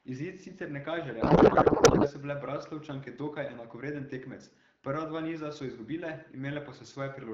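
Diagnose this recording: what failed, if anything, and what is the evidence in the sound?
The failure is at the codec stage: a codec payload misread. Right after "sicer ne kaže", from 1.21 to 2.09 s, the speech gives way to garbled noise and warble until "so bile". That fits octet-aligned AMR frames being unpacked as bandwidth-efficient, scrambling every field. Around it, the 12.65 kbit/s AMR-WB speech stays clear.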